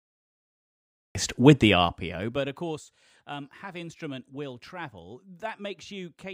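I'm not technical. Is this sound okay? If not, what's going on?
No. Cut-off start: the first 1.15 seconds are dead silence, and the speech then begins abruptly at 1.15 s, mid-sound, with no natural lead-in. The recording started late and caught the talking already underway.

Zipper noise: from 1.6 to 2.84 s, the volume drops a long way in small jumps, about 30 per second, instead of gliding down. Each jump makes a tiny click, so a fast ticking or zipping rides on the speech while the level falls.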